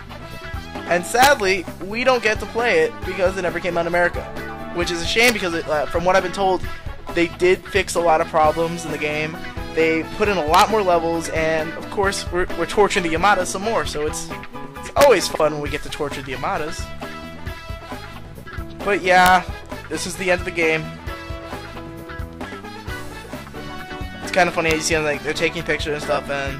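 At 1.23 to 1.27 s there's a hard crack that's an integer overflow. The signal pushes only about 1 dB past full scale, but instead of being limited the sample values wrap round to the opposite sign, so each peak jumps across the whole range. That's why it sounds far sharper than clipping. The same thing happens right at the limit at 5.24 to 5.30 s, 10.54 to 10.61 s and 15.01 to 15.04 s.

Just after that, at 15.32 to 15.40 s, you get frames out of order. Two neighbouring blocks of about 46 ms each, which fits pairs of roughly 23 ms frames, come out swapped. You hear a brief garbled flutter, and nothing actually goes missing. It happens again at 18.46 to 18.56 s.

The overflow cracks come back at 19.26 s and then at 24.71 s, where the peak goes about 1 dB over. The last swap, at 26.12 to 26.17 s, uses shorter blocks of about 23 ms.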